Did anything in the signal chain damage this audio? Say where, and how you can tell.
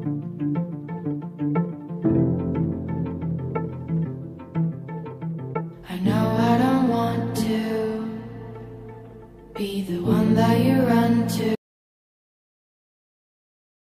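Yes. An audio dropout to silence runs from 11.56 s to the end. The input was likely lost at the device or link, and the recorder kept writing silence.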